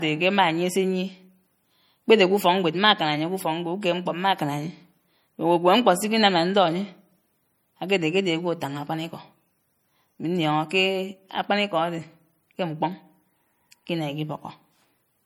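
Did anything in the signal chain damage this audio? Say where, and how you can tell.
Yes. Low-bitrate audio saved at a high bitrate, at the codec stage, throughout the speech: the smeared, swirly artefacts of a heavy MP3 encode persist, fitting a 48 kbit/s MP3 likely re-saved at 320 kbit/s. That second pass restored nothing; nothing appears above 20.1 kHz.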